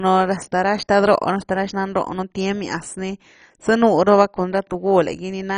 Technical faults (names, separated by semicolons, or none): MP2 compression